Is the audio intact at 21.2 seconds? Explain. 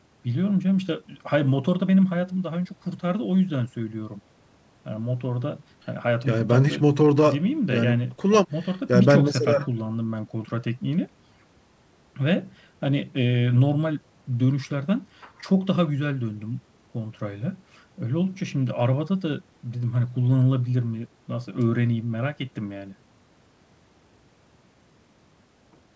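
Yes, at 21.2 seconds the speech plays through cleanly, with no dropout, click or distortion, only the ordinary narrowing of a call line with nothing heard above 8 kHz.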